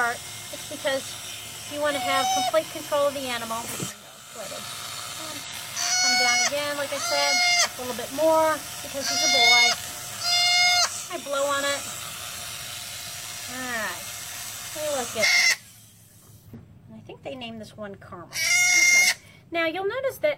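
The audio is broken by five short bursts of damaged data in a compressed stream, at 3.86–3.92, 5.44–5.50, 13.05–13.10, 15.19–15.25 and 16.54–16.60 s. Each lasts about 40 to 60 ms. Each is heard as a brief chirp, squawk, click or short hole cutting through the sound. Bytes in the encoded file were lost or corrupted there. The decoder misreads those frames, loses sync and hunts for the next valid frame header before playback resumes.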